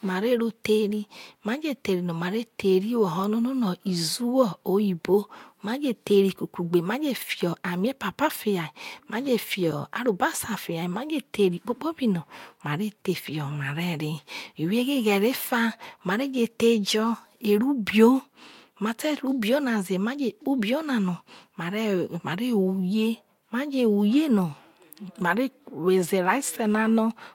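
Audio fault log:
throughout, low-bitrate audio saved at a high bitrate: the speech has nothing above 16.6 kHz, likely from a low-bitrate encode later re-saved as a larger MP3.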